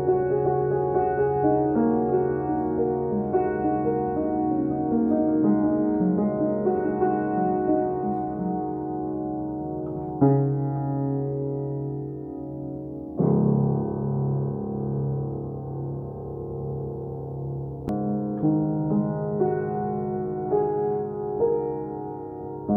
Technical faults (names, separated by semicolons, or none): CD skip